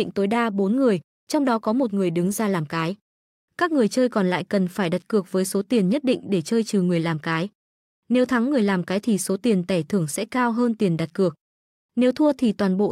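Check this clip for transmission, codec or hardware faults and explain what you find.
Nothing stood out on listening to this speech recording.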